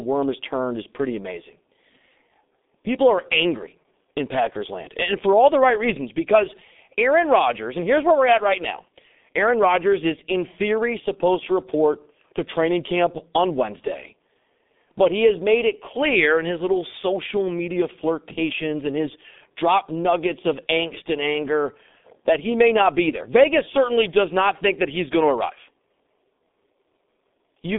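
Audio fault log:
Throughout: G.723.1 codec. The speech sounds muffled and hoarse, with consonants smeared together, the mark of heavy damage from a low-rate telephony codec running at about 6.3 kbit/s. It carries only a narrow telephone band of roughly 200 Hz to 3.6 kHz, with nothing above 3.7 kHz, so sibilants and crisp edges vanish. The codec models the voice in 30 ms blocks and refreshes that model slowly, which blurs quick transitions and leaves a rough, buzzy texture.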